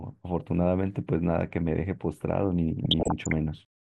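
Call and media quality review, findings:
Low-rate MP2 compression, likely cause, throughout: upper sub-bands starved of bits, consistent with roughly 80 kbps. Speech plainly dull, gurgling granular distortion on all speech.

DAB burbling, 2.84–3.33 s: bit errors around half a percent passing error correction, corrupting sub-band samples. Short noise blips in single sub-bands.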